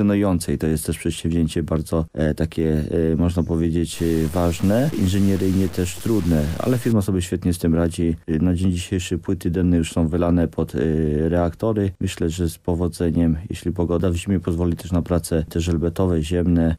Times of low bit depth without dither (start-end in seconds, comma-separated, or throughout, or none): 3.94-6.92